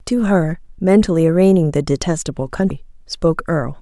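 At 0.78 s the speech jumps forward by around 70 ms, roughly a couple of frames, and at 2.70 s it happens again with a bigger leap of around 150 ms, about four frames. That's compressed frames being skipped: whole chunks never got decoded, and the jump size fits a 32 ms codec frame.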